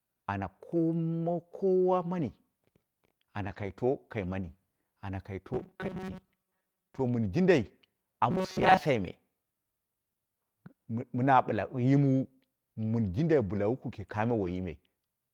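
Lost packets rebuilt from error correction roughen this speech recording at 3.43 to 3.69 s, at 7.65 s and at 14.41 to 14.47 s, covering about 140 ms, 20 ms and 40 ms. Each missing stretch was replaced by the low-bitrate copy carried in the following packet, so no gap opens. Those substitute frames sound coarser and noisier than their surroundings. Robotic sound from repeated short buffers appears at 5.54 to 7.01 s and 8.31 to 8.79 s as a rigid, metallic 188 Hz buzz that still roughly tracks the speech. The likely cause is new audio arriving too rarely, so the last few milliseconds are replayed while real audio is skipped. The buzz pitch matches a repeat period of about 5.3 ms. Roughly half of the first stretch and most of the second is repeated material.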